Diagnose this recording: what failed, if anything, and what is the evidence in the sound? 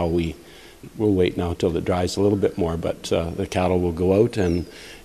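Nothing failed here; no faults.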